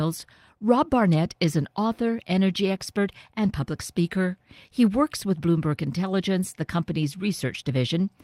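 A speech clip with clock drift between sender and receiver running all the way through. The sender's clock runs fast, by about 4 percent. Audio therefore arrives slightly quicker than the receiver plays it out. The jitter buffer keeps filling. To stop it overflowing, the receiver must throw away small pieces of sound. The result is a steady push to keep pace with a source that never slows down. Repeated timing corrections follow from this, from 0.04 s to 8.17 s. Every edit goes the same way. Short pieces are cut out, never repeated. Together they bring the playback to about 104 percent of normal speed. The cuts are small and unevenly spaced. If heard at all, they come through as faint hiccups and a slightly hurried, uneven tempo in the speech.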